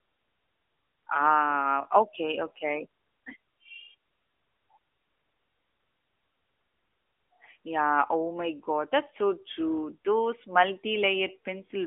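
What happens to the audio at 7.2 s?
At 7.2 s the speech carries AMR narrowband mobile codec damage, present across the whole clip. Content above 3.8 kHz is gone, leaving a 300 Hz to 3.6 kHz phone band, and the pulse-driven vocal-tract model gives a plainly buzzy, synthetic quality, which fits a mid-rate mode around 10.2 kbps.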